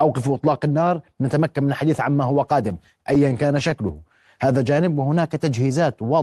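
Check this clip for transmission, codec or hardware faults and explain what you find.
Two jitter-buffer faults appear in this speech, both carried over a call codec whose top end stops near 12 kHz.

From 2.69 to 4.00 s there are repeated stalls (stutter). Packets kept arriving behind playback, so the buffer drained ten times and the receiver stretched the last sound to bridge each wait. The gaps are short, the longest about 15 ms, and nothing is lost, but the speech drags and catches.

Between 4.52 and 5.03 s a jitter buffer slow-down sets in. To build up a reserve, the receiver repeated single pitch periods to gain about 42 ms, so this stretch plays at 93% speed with unchanged pitch, sounding drawn out.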